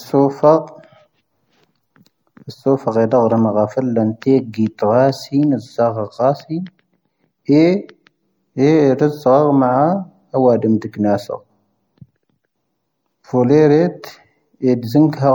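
Across the whole speech clip the treble stops abruptly at about 17.1 kHz, and the damage is plainly audible: a watery, swirling texture with chirpy sibilants and softened onsets. The likely cause is MP3 compression, consistent with a 64 kbps encode dropping weak frequency lines frame by frame.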